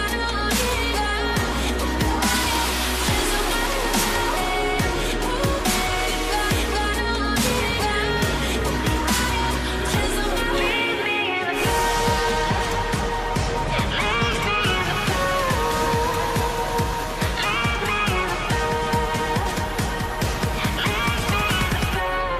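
Throughout, the sound is dull and gurgling, with grainy upper bands flickering in and out. This is likely MP2 compression at a low rate, consistent with about 80 kbps.

Short blips of noise in single sub-bands break through at 4.22–4.57 s, 8.25–8.52 s, 14.25–14.45 s and 20.03–20.49 s. This is DAB burbling: reception bit errors slip past error correction and knock individual sub-bands out of level.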